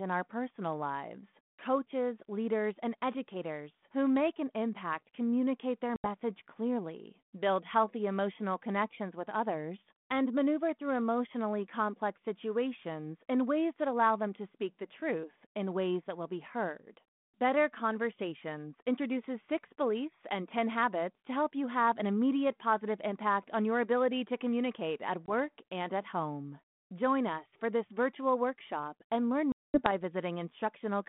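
Packet loss on an ADPCM call cuts hard silences of about 80 ms at 5.96 s after "an impact communicate their", 20 ms at 25.26 s after "ability to communicate at", and 220 ms at 29.52 s after "virtual workshop and learn". Unlike a plain dropout, each hole is followed by slightly distorted audio for some tens of milliseconds while the decoder's predictor and step size resynchronise with the sender's.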